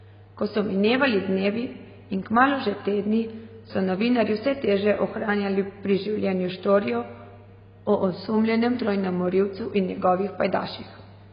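From start to finish the speech carries heavy AAC compression damage, likely from AAC-LC coding at a very low bitrate. Nothing reaches above 5 kHz, so the sound is dull and muffled, and sibilants turn fizzy and smeared. What separates this from a simple low-pass filter is the texture below the cut-off: the encoder starves bands of bits, leaving a warbling, watery swirl on sustained sounds instead of a clean loss of treble.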